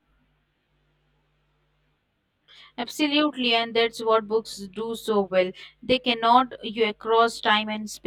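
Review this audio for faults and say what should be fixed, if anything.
Channel delay (comb filtering) runs throughout the speech: one channel lags around 20 ms, and summing to mono cuts evenly spaced notches from around 30 Hz upward, making it sound rough or slightly doubled. Align the channels before summing to mono.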